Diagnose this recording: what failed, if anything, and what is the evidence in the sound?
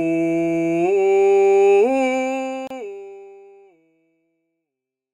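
Codec stage: a gap at a join of encoded pieces, a 31.5 ms gap at 2.67–2.70 s, a blank spectrogram strip where untrimmed encoder delay and padding remain.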